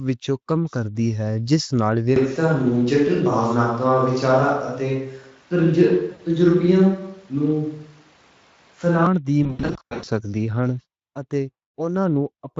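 Right after "جس نال", at 2.16 s, the sound turns roomy and hollow, with thinner bass and a faint room noise roughly 35 dB below the speech, yet with little change in level. It stays that way until 9.06 s, then snaps back just as abruptly. That is likely a switch to a distant microphone, with the close microphone dropping out. A sudden change in room character with a near-constant level sets it apart from a simple gain drop or added reverb on the same microphone.

Within that stretch, from 6.11 to 6.22 s, comes the first VoIP packet loss concealed by the speech codec. About 80 ms of audio are missing, which fits four 20 ms frames. The decoder fills the gap by extrapolating from the last pitch into a short stretched sound that fades, and the sound stays weak just after. A second, longer episode runs from 9.43 to 10.09 s. About 420 ms are lost across 640 ms in scattered bursts, the longest lasting 100 ms, giving repeated smears that fade and recover. 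Unlike clean dropouts or clipping, these gaps are filled with an extrapolation rather than silence, and they heal gradually instead of cutting back in sharply. The light coding damage of the Speex codec at about 27.8 kbps runs throughout.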